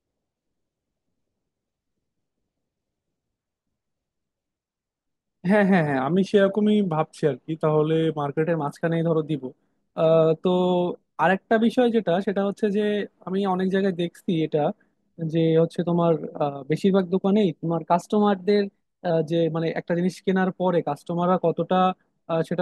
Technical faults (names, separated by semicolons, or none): drift correction step